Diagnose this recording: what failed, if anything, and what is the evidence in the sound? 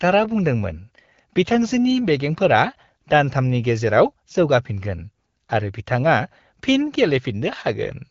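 Nothing has failed here; the speech comes through an AMR wideband (HD Voice) path at 12.65 kbit/s with only the light coding texture you'd expect at that rate, and nothing above about 7.5 kHz, which is simply where that codec's band ends.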